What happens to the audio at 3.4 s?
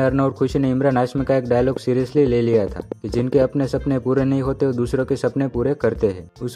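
A train of clicks runs from 1.77 s and ends at 3.43 s, right at the moment asked. Repeated pulses, likely from interference or a faulty connection, arrive unevenly at about 6 per second, around ten in all, ticking roughly 10 dB above the sound.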